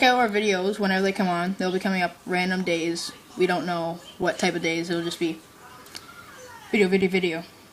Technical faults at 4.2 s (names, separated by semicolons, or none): underrun with held sample